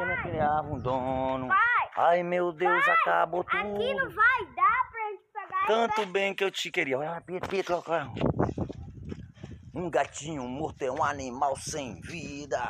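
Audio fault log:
Nothing stood out on listening.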